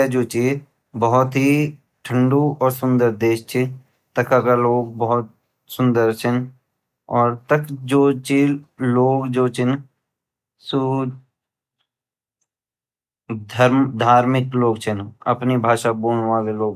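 No technical faults can be heard anywhere in this speech recording, with the signal holding steady and intact throughout.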